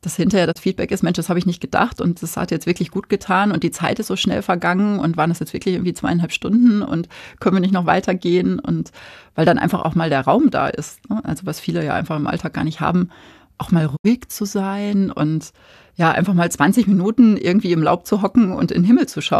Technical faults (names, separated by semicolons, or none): digital broadcast dropout